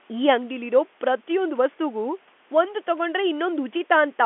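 Nothing stood out on listening to this speech, which comes over the telephone band with nothing above about 3.8 kHz, as expected of G.711 telephone coding.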